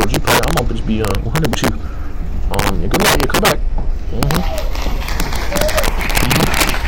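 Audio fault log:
Throughout: integer overflow. Loud peaks break into violent, sharp cracks, harsher than clipping. The signal runs about 11 dB past full scale, and around two percent of samples wrap past the integer limit to the opposite sign instead of being held there.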